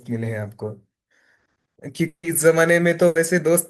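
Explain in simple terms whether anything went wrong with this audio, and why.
Two spots trip up this speech clip. From 2.07 to 2.26 s the audio stalls. The last sound gets stretched into a buzzy hiss that fades, then there's a short bit of near-silence before things pick up again, with roughly 160 ms of what was said simply gone. That's most likely a long network dropout, where the audio stopped arriving for a while and the player papered over the hole as best it could.

The second one is smaller. Between 3.07 and 3.18 s there's a burst of packet loss: a short run of audio, about 80 ms, never made it in time. The player held onto the last sound and let it die away as a brief buzz or hiss, then jumped ahead, so a small slice of speech is skipped right there.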